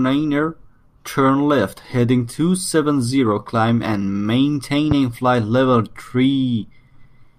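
A speech recording with a single loud pop from 4.91 to 4.94 s, standing roughly 10 dB above the speech level. It is one short, broadband thump laid over the talking, and the speech continues unbroken beneath it. That distinguishes it from a dropout or buffer glitch, which would cut or repeat the audio. The likely cause is an electrical pulse, such as a switch, plug or static discharge, entering the signal chain.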